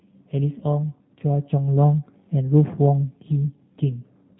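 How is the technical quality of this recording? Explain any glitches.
The recording has clearly audible low-bitrate speech-codec damage throughout and one brief dropout early on.

G.729 codec, entire clip: The speech is confined below 4 kHz and sounds slightly rough and synthetic, which fits G.729 at 8 kbit/s. The codec rebuilds each 10 ms frame from a vocal-tract filter, a pitch predictor and a few pulses, so fine detail is lost.

VoIP packet loss concealed by the speech codec, 0.59 to 0.64 s: About 20 ms of audio is missing, consistent with two lost 10 ms frames. The decoder fills the gap by extending its last pitch and filter at falling gain, producing a short, fading smear.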